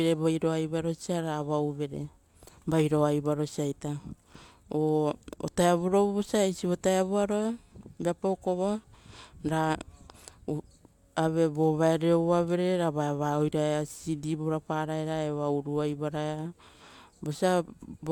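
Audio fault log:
No fault is logged for this speech clip.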